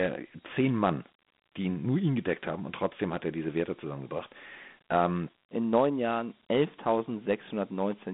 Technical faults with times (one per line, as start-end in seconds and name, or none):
0.00-8.13 Dialogic VOX ADPCM